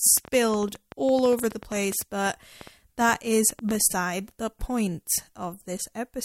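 A train of clicks runs from 0.07 to 3.82 s: about thirty uneven pulses, 8.8 per second, popping just above the speech, likely from nearby electrical interference.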